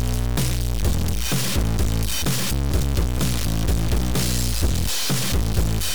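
Harsh, buzzy distortion runs through the whole clip, and even the quiet stretches fill with a steady noise floor sitting well above silence. That points to a stuck bit, likely a single data line or converter bit frozen, adding errors around -20 dBFS.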